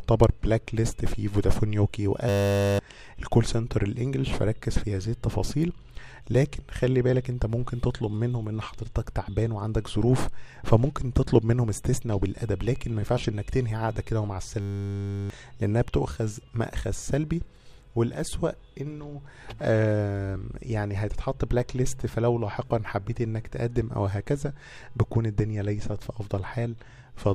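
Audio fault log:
2.29–2.79 s and 14.6–15.3 s, system hang loop: a frozen 10 ms buffer repeats at 100 Hz, making a buzz. Spectrogram shows 100 Hz harmonic stripes; waveform shows identical cycles.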